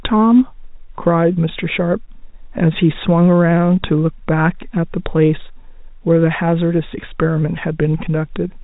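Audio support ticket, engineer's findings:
No fault found in the speech; the telephone-band G.711 coding behaves as expected, with nothing above about 3.8 kHz.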